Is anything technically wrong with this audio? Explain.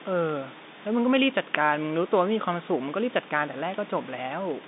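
No, nothing is technically wrong with this audio.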